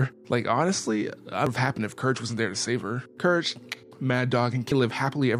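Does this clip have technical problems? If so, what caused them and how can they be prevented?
Yes. Damaged data in a compressed stream causes brief glitches at 1.47 s and 4.72 s. Corrupted bytes there made the decoder misread frames and lose sync. It then hunted for the next valid frame header. Checksummed transfer and verified storage would prevent this.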